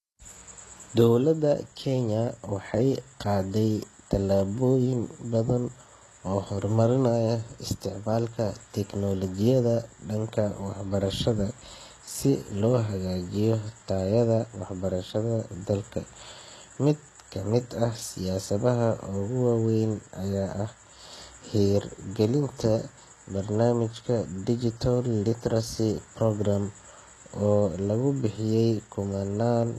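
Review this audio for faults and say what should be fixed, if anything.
Throughout, s sounds come out gritty and lispy, likely HE-AAC compression near 16 kbps rebuilding treble from copied lower bands. Encode at a higher bitrate with plain AAC or Opus so the treble is coded directly instead of reconstructed.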